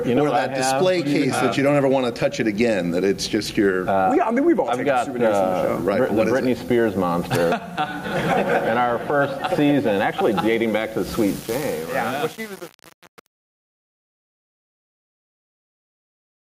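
Right from the start there's gain pumping: the gain is pulled down on every loud moment, a swing of somewhere around 15 dB, so everything feels squashed. That's likely the input gain set way too high with a fast limiter or compressor clamping down on each peak.

From about 11.27 s to the end at 16.59 s there's truncation distortion on a fade. The fade is computed with too few bits and no dither, which fits an 8-bit stage. As the level sinks, the tail turns gritty.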